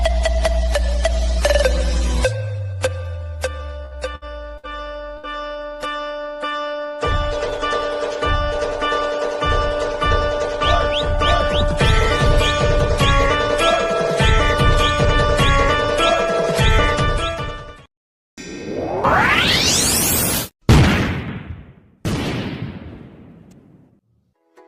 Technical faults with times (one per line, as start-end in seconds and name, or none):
3.85-4.24 burst of packet loss
4.57-4.66 burst of packet loss
5.17-5.26 burst of packet loss